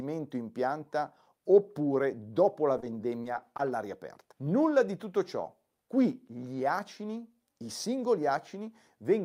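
Speech with short concealed packet loss at 2.80, 3.22 and 3.57 s, the first two just after "pianta oppure dopo la". Each time about 20 ms never arrived, and the decoder filled it by extending the preceding sound. That gives a brief smear or wobble rather than the hard silent gap of a plain dropout.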